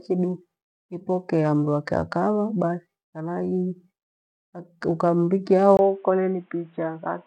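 At 5.77 s the input likely switched to a poorer device: after a brief 20 ms silence, the speech loses everything above 3.8 kHz and turns dull and boxy, with a faint new background noise, about 40 dB down, at roughly unchanged loudness.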